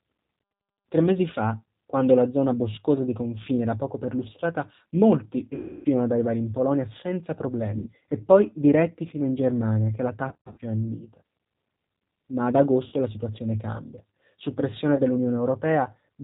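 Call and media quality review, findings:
Rough, slightly synthetic speech throughout, band-limited with nothing above 4 kHz. G.729 codec (G.729A at 8 kbit/s): speech rebuilt from a vocal-tract filter, pitch predictor and sparse pulses per 10 ms frame, so fine detail and bandwidth are lost.

Stretched, fading buzzy tone or coloured noise, with weak, distorted speech just after, at 5.55–5.88 s (about 300 ms gone), 7.78–7.89 s (80 ms), 10.29–10.61 s (210 ms scattered across 300 ms, longest gap 60 ms), 12.88–12.94 s (40 ms) and 14.95–15.01 s (30 ms). VoIP packet loss concealed by the speech codec: the decoder extrapolates the last pitch and filter at falling gain, and recovery lags because each frame builds on the previous one.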